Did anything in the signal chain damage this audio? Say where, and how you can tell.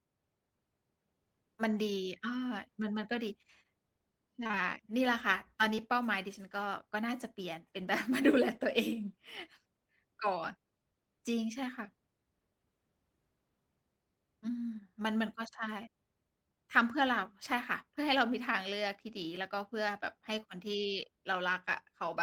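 Yes. Around 4.43 to 4.55 s the speech briefly smears and wobbles. That is short concealed packet loss at the network stage: three consecutive 20 ms gaps, at 4.43, 4.47 and 4.51 s, were each patched by the decoder extending the preceding sound, then blending back into real audio.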